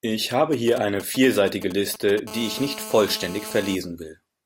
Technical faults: GSM signalling bursts; GSM phone buzz

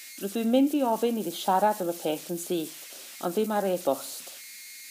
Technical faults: converter idle tones

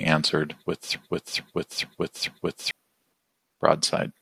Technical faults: broken-record loop

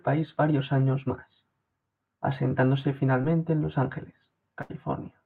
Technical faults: short concealed packet loss; burst of packet loss

